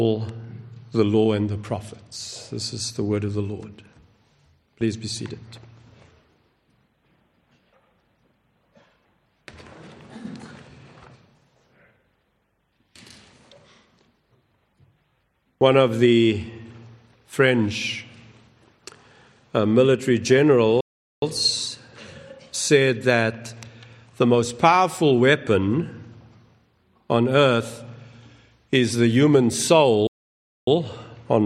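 At 20.81 s the sound stops dead mid-flow. This playback stall lasts about 0.41 s, then picks up again. A second stall follows at 30.07 s, lasting 0.6 s. The player was likely starved of data or blocked, leaving silent output.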